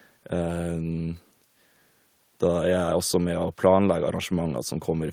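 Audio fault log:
No faults found; the speech is clean throughout.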